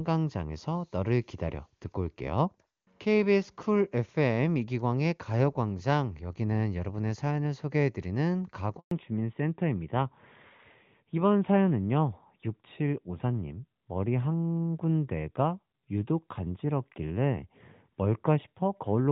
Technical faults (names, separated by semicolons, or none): handover gap; fallback to narrowband